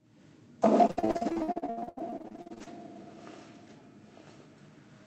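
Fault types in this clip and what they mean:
Repeated packet loss (robotic sound), 0.87–2.68 s: lost packets were patched by stretching earlier sound, leaving roughly half the stretch choppy and robotic, with gaps up to 79 ms.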